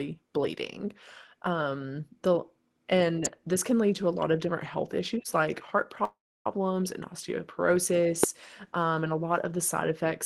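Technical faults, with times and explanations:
3.25 s and 8.24 s, electrical switching spike: each is a sharp snap, lasting about 10 ms and 2 ms respectively, laid on top of the speech rather than replacing any of it. A brief arc from a nearby switch, relay or static discharge is the likely cause, coupling a fast voltage transient into the audio line. Because the arc is so short and broadband, it registers as a hard click.
6.04 to 6.47 s, call audio freeze: the speech stalls for about 0.41 s. The last sound is stretched into a fading buzz before dropping to near silence for roughly 0.31 s. The speech then resumes exactly where it stopped, so nothing is lost, but everything after this point arrives about 0.41 s later. This likely comes from delayed packets emptying the jitter buffer, with the receiver filling the wait until they caught up.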